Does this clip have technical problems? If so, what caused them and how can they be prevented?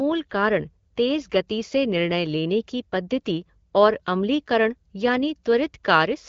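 No, there are no technical faults to fix; the speech is carried over AMR wideband (HD Voice) at 12.65 kbit/s, which accounts for the band limit with nothing above about 7.5 kHz, and no preventive step is needed.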